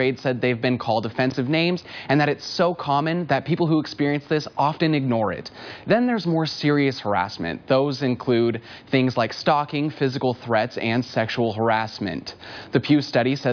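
No technical faults can be heard anywhere in the signal.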